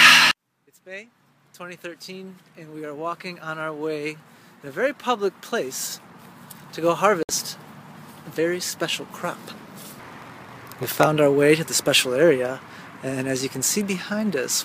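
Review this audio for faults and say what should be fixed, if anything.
Bluetooth stall at 7.23 to 7.29 s: the sound drops to about 61 ms of silence, then resumes, likely because delayed packets left the headphone buffer empty.

Block size mismatch (padded) from 9.54 to 11.07 s: shorter blocks are zero-filled to fit reads that point to 512-sample blocks, producing a 93.8 Hz buzz and playback at 0.938 speed.

To prevent these, reduce wireless interference or enlarge the receive buffer, and make each processing stage write the same block size the next one reads.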